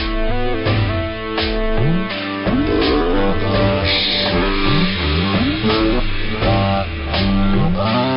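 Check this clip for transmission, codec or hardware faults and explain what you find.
The whole clip has a wrong sample rate fault. Throughout, everything runs at one third of its proper speed and sits about 19 semitones low, just over an octave and a half down. That fits material recorded at 48 kHz being played back at 16 kHz with no conversion, so every sample lasts three times as long. The result is slow and dark. Because pitch and tempo drop together by exactly the same ratio, this is distinct from a time-stretch or pitch-shift, which would change only one of them.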